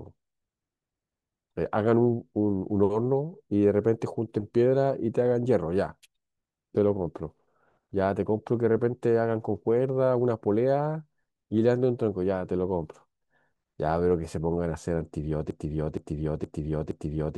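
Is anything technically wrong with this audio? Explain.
Yes. From 15.51 s, the stream likely stalled and resent its last fragment, a broken-record loop: one 0.47 s piece repeats four times to the end.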